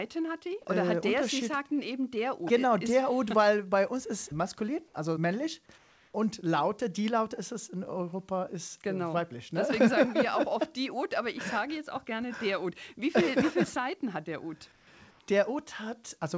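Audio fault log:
5.78–6.14 s, 14.72–14.87 s, 15.11–15.20 s: comfort noise in place of the background. The detailed background turns into steady, featureless hiss about 2 to 5 dB quieter, not the silence a gate leaves. This is likely from discontinuous transmission filling the pauses.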